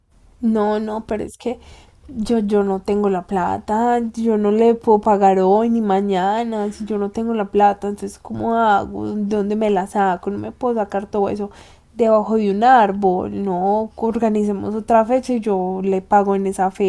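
Nothing stood out as a technical problem on listening to this speech recording.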